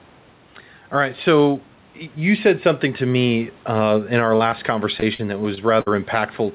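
Gain pumping runs through the whole clip. The level rises and falls by a few decibels. The likely cause is input gain set too high, with a fast limiter pulling it down on each loud sound; the room noise sits about 34 dB below the speech.

Short concealed packet loss occurs at 4.36–4.42 s and again at 4.50–4.54 s. These are holes of 40 ms and then 20 ms that the receiver patched by extending the preceding sound before blending back in. They are heard as brief smears or wobbles, and a short consonant may go missing.

Repeated packet loss (robotic sound) spans 5.00–5.88 s. Several holes, the longest 58 ms and about 140 ms in total, were each filled by continuing the last sound, covering roughly a sixth of the stretch. The result is choppy, with pieces dropping out, against a band that stops at 4 kHz, consistent with a G.711 call codec.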